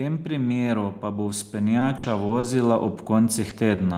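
From 0.22 s to the end, automatic gain rising lifts the level gradually as the control decides the input is too quiet. The speech and background swell together, and the waveform envelope widens steadily.

Between 1.79 and 2.45 s, repeated packet loss (robotic sound) breaks the speech into a choppy stretch. About 140 ms is patched by extending the preceding sound, and the longest hole is about 60 ms. On a spectrogram, smeared, repeated harmonic blocks replace natural detail.

At 3.49 to 3.53 s and again at 3.75 to 3.79 s, short concealed packet loss fills about 20 ms each time. Each is heard as a brief smear or wobble and shows as a tiny stretched patch in the spectrogram.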